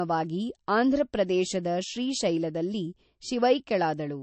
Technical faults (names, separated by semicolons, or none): MP3 compression